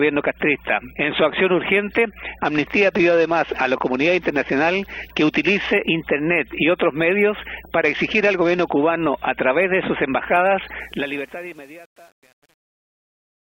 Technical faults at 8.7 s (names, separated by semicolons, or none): Bluetooth SBC bit pool drop